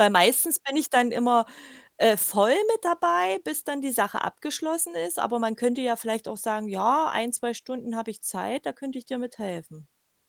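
No technical faults can be heard anywhere in the speech recording. There are no events to place in time.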